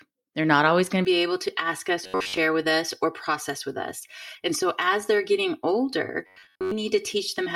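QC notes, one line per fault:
1.05–7.56 s, channel delay (comb filtering): from "not always going", one channel lags about 3 ms. The mono sum notches near 200 Hz and upward, giving steady hollowness without buzz.
2.04–2.37 s and 6.27–6.72 s, robotic sound from repeated short buffers: a rigid 93.8 Hz metallic buzz, likely from a roughly 10.7 ms buffer repeating while most real audio is skipped. This imposes a pitch rather than notches.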